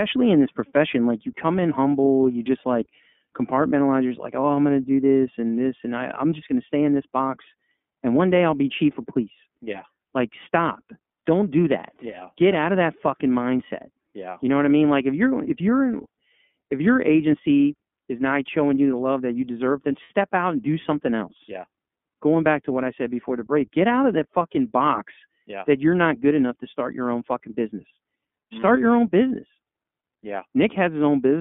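From the start the whole clip runs through the iLBC codec. The speech sits in a narrow 200 Hz to 3.5 kHz line band and has a rough, slightly synthetic edge. Each frame's excitation is coded on its own, which fits the 30 ms, 13.33 kbps mode.

Then at 20.03 to 20.11 s come lost iLBC frames, about 60 ms missing, which fits two dropped 30 ms frames. The decoder fills the hole by repeating the last pitch cycle mixed with noise, so you hear a brief held, buzzy vowel before the speech snaps straight back.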